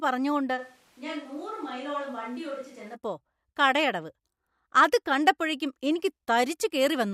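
Speech. From 0.59 to 2.93 s the voice abruptly turns hollow and roomy, drops roughly 10 dB, and gains audible room noise. Likely cause: a switch to a distant microphone.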